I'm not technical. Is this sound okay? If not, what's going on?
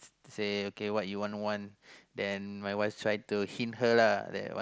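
No, not quite. There are two brief glitches from concealed Bluetooth headset packet loss. At 1.31 s, and again from 4.23 to 4.26 s, a few bits of the speech failed to get from the headset to the phone. The phone filled each gap by repeating a snippet of the sound just before it, so you hear a tiny buzzy smear with a slight wobble as the real speech resumes. The second one is a bit longer.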